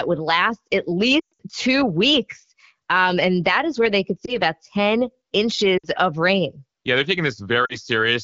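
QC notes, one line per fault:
1.20–1.42 s, 4.25–4.36 s, 5.77–5.86 s, 7.65–7.77 s: lost AMR speech frames. Damaged frames failed their check. The decoder reused the last good settings at falling gain. Between "would last at" and "two weeks", a 120 ms run drops to near silence. The single lost frame at 4.25 s is a brief dip, and the 60 ms and 40 ms losses follow at 5.77 s and 7.65 s.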